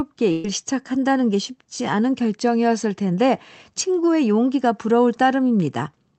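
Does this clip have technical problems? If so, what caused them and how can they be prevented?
Yes. A burst of packet loss occurs from 0.31 to 0.45 s. About 130 ms of speech never arrived, and the receiver filled the gap by stretching the last received sound and fading it down, so there is a brief held sound instead of true silence. Speech then resumes later in the utterance with that stretch missing. On a spectrogram this appears as horizontally smeared, repeating content that dims and then breaks abruptly into new speech. On the waveform it appears as a decaying, repetitive envelope. The call codec's high-frequency limit at 8 kHz is also visible as an empty band above that line. To prevent the loss, use a more stable network path and enable forward error correction or a larger jitter buffer.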